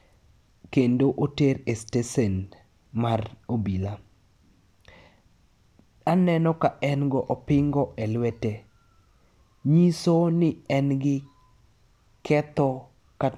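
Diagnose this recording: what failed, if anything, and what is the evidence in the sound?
Nothing failed; the speech carries no audible fault.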